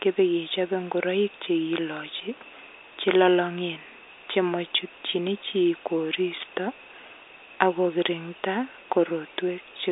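At 4.30 s the speech is hard clipped, driven about 3 dB past the level the chain can pass, so its top is sliced flat and heard as a brief crackle. From 6.37 to 6.45 s the overload is about 5 dB and lasts longer, giving a harsher fuzzy edge. The flattened waveform adds harmonics, and the band-limited telephone path passes nothing above 3.8 kHz.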